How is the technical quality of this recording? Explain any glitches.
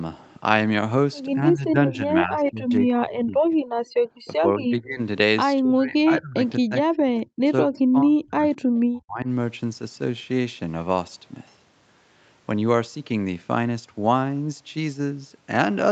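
The recording has repeated dropouts in the talker's level through the middle of the clip, plus one brief collapse of the room sound; the audio stops at about 8 kHz, as expected for this call path.

Speech suppressed in double talk, from 1.35 to 3.53 s, 4.41 to 5.0 s, 5.59 to 6.43 s, 6.59 to 7.45 s, 7.62 to 8.44 s and 8.87 to 9.27 s: the echo canceller likely mistook this talker for loudspeaker echo and pulled the level down, by roughly 25 to 40 dB at worst, so the sound dips and breaks up.

Background gated by the echo canceller, from 3.85 to 4.13 s: with the loudspeaker active, the canceller clamped the microphone, and the room sound drops by about 40 dB for roughly a third of a second before returning.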